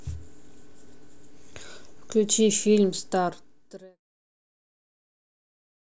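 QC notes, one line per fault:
Nothing stood out on listening to this speech, and the smooth fade-out that runs from around 2.5 s to 4.02 s sounds like a deliberate edit.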